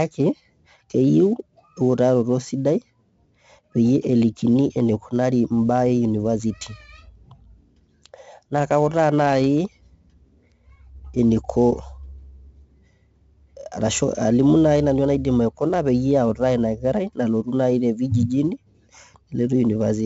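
Speech, carrying heavy 4-bit ADPCM compression throughout. Each sample is coded as a coarse step from a prediction. The result is gritty hiss that tracks every loud syllable and distortion on sharp onsets. Nothing sounds above 7.7 kHz, which fits a 16 kHz, 64 kbps stream.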